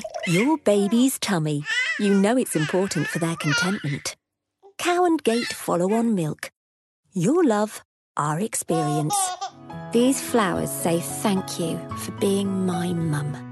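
At 1.71 s and again at 4.13 s the output shows a repeated buffer. New audio failed to reach the device in time, so it replayed its last block, which lasts about 5 ms and fits a very small playback buffer. The block plays once extra at 1.71 s and twice extra at 4.13 s, with a hard join at each repeat. Because the block is so short, each event comes across as a click or tiny buzz rather than a stutter.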